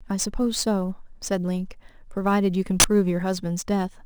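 Speech with two faults. The converter's sampling clock suffers from sample clock jitter throughout: each sample is taken a few microseconds early or late at random, and the resulting error lands roughly 20 dB below the signal. Because the timing error costs more where the waveform changes fastest, it comes through as a grainy hiss riding on the speech, growing on loud passages and bright sibilant sounds and dropping away in the pauses. Separately, at 2.80 to 2.84 s an uninitialised buffer reaches the output: a block went out before any audio had been written into it, so whatever stale memory it held was played as samples. The 40 ms span fits one 40 ms block. It cuts in as a sudden, loud burst of harsh digital noise that is unrelated to the surrounding speech.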